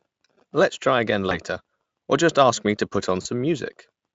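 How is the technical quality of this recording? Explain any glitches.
Two short glitches occur, both from VoIP packet loss concealed by the speech codec. Packets went missing, and the decoder bridged each gap by extending its last pitch and spectral shape while lowering the gain. Just after "try again", from 1.29 to 1.39 s, about 20 ms was lost, which fits one missing frame. After "ask me to put", from 3.21 to 3.26 s, about 40 ms was lost, fitting two. Each gap comes through as a brief buzzy tone or coloured noise that fades, and the sound stays weak until the decoder recovers. The Speex coding itself leaves only faint traces at most.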